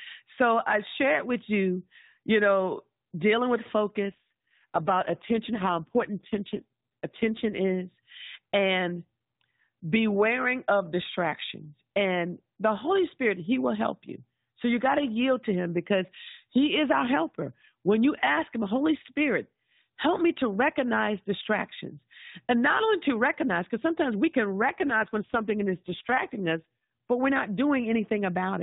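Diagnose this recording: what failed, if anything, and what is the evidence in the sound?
An AMR rate drop at the codec, driven by the network: from 4.10 to 7.79 s and from 24.62 to 26.83 s the speech turns rougher and buzzier, which fits a fall from 12.2 to 5.9 kbps. Unlike packet loss, there is no gap and the narrowband limit stays the same.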